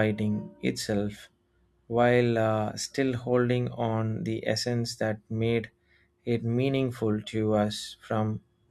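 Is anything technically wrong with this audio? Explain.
No, there is nothing technically wrong with this speech recording.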